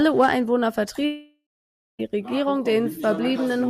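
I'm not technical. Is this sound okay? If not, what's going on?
No. From 1.05 s to 2.01 s the speech breaks off for almost a second. At first the last sound lingers as a buzz that fades away. Then there is about half a second of silence. The speech returns at 2.01 s, but the piece in between is simply gone. This is a long network dropout. The audio likely stopped arriving over the connection, so the player filled the gap as best it could.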